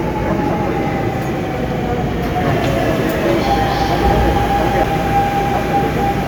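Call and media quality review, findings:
CD skip at 4.84 s: tick with a mute of a few milliseconds, then playback resumes at a different point in the audio. Probable component is the disc transport. Shock or a disc flaw threw the laser onto another turn of the spiral.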